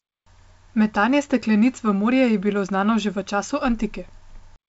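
Nothing faulty is audible in this speech recording.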